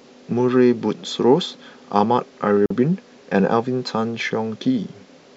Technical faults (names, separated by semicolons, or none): gap at a join of encoded pieces